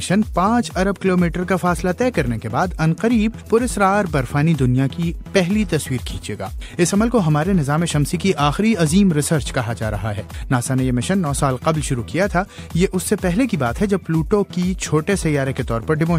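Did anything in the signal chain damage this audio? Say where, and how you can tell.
No, nothing in the signal chain damaged this audio that I can hear.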